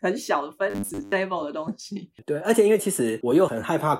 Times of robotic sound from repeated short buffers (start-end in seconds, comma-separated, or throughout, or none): 0.70-1.13